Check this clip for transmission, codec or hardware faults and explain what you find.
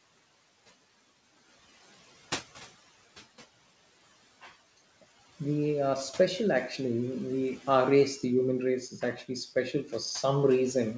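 Two problems show up here, both from the noise suppressor, while the call link itself sounds clean: the band stops at 8 kHz, which fits a wideband codec like G.722 at 64 kbps.

The first is noise suppressor artifacts, running through the whole clip. The suppressor pulls the background down by about 15 dB, deciding frame by frame and band by band what counts as steady noise. That room noise sits about 18 dB under the speech to begin with, so you hear it sink away in the gaps and come back underneath the talking.

The second is speech cut by the noise suppressor, from 8.9 to 9.3 s and again from 9.73 to 9.93 s. In both spots the suppressor mistook quieter bits of speech for background and turned them down by up to about 9 dB along with the noise. Only short pieces get hit, roughly 150 ms in the first stretch and 100 ms in the second, so these bits come across as swallowed or oddly faint rather than missing outright.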